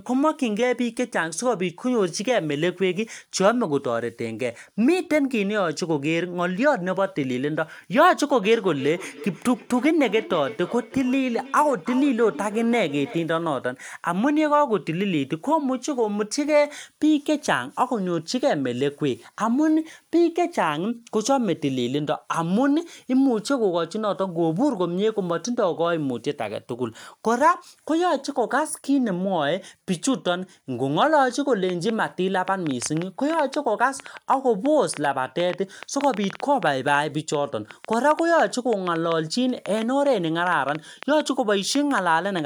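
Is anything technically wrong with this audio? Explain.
Yes. From 8.43 to 13.37 s there is feedback echo between two devices: a second device replays this microphone's signal, which is picked up again and never cancelled. Speech returns roughly every 300 ms, peaking about 15 dB below the speech. From 31.7 to 42.4 s a train of clicks, likely from nearby interference or a faulty connection, adds around seventy irregular ticks, about 5.7 per second, peaking about 10 dB above the signal.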